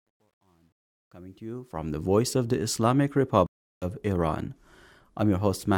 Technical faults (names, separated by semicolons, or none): truncation distortion on a fade; stream reconnect